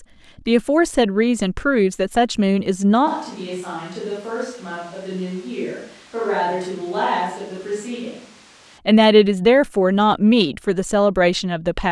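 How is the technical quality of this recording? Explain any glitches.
The recording has one clear glitch, a switch to a distant microphone, in the middle of the speech.

From 3.08 s to 8.77 s the speech abruptly turns roomy and hollow, loses its bass, and drops by roughly 10 dB, while background noise rises to around 20 dB below the speech. The likely cause is that the close microphone's feed dropped out and a farther microphone was used instead. Both changes are sudden. A plain gain dip or a filter would not add reverberation and room noise.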